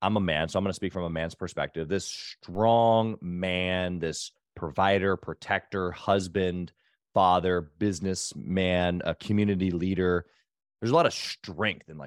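At 2.55 s the signal's zero line jumps by about -37 dBFS, a DC step that a 2 Hz high-pass slowly drains away, heard as a single low thump under the speech.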